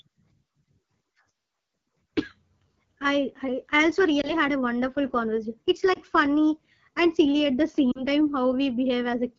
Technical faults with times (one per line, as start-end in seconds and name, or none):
0.00-9.38 AMR wideband (HD Voice) codec
4.21-4.31 lost AMR speech frames
5.94-5.99 lost AMR speech frames
7.92-8.03 lost AMR speech frames